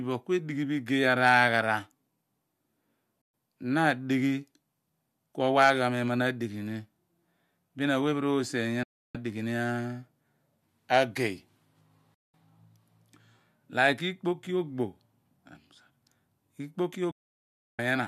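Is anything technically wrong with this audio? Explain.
Yes. This speech clip has a digital broadcast dropout at 3.22–3.34 s, 8.83–9.15 s, 12.14–12.34 s and 17.11–17.79 s. The receiver lost valid frames and muted, cutting the sound to silence in about 3 ms for 120 to 670 ms each time. Whatever was transmitted during those gaps is gone.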